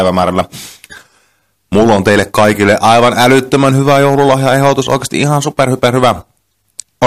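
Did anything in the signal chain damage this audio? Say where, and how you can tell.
Yes. Hard clipping runs through the whole speech clip: the peaks are cut flat wherever the level tops out, driven about 11 dB past the limit of a converter or a fixed-range sample-format stage. A few percent of samples were pinned at that stage's limit, so each loud syllable gets a brittle crackle from the square-edged tops spraying harmonics high up the spectrum. Soft saturation would round the peaks and sound warm, not abruptly fuzzy.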